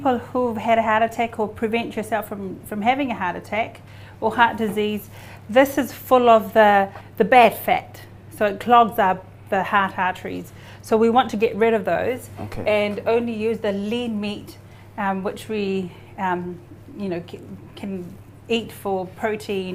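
At 12.54 s a phantom power thump: a supply switched on or off on a live input, its step passing through the coupling capacitors as a deep thump peaking around -22 dBFS, decaying in 36 ms, ending by 12.70 s.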